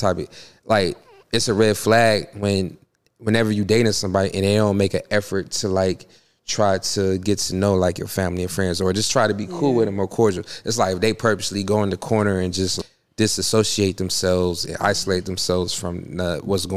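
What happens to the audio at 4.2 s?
At 4.2 s the audio is intact, with no audible fault at that moment.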